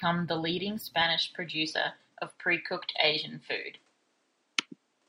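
A speech recording whose input was likely switched to a poorer device at 1.02 s, with the rest of the clip, through to the end, captured on that second path. From that moment the top of the spectrum disappears, with nothing above 10.2 kHz, so the speech loses its air and crispness. A faint new background noise sits roughly 40 dB below the speech. The changeover is seamless, with no gap at the switch and the level staying about the same.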